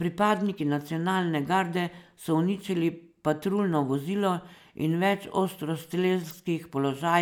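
From 0.12 s to 5.53 s the speech carries a click about every 1.8 s, four in all, which marks clock drift buffer slips. The likely cause is two devices on separate clocks differing by around a hundred parts per million, so the buffer between them creeps until a handful of samples is dropped or repeated. Unlike random dropouts or packet loss, these clicks keep a strict, even spacing, with no audible gap.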